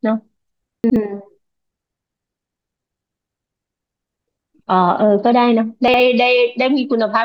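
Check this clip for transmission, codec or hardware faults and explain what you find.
Two brief faults of the same kind turn up, both chunks out of order. At 0.84–0.96 s and again at 5.88–6.00 s, a 60 ms chunk reached playback one chunk late and was swapped with its successor. No audio is lost, but the reordered sound jumbles briefly, with three hard joins.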